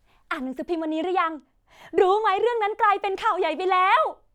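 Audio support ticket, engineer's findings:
No faults found.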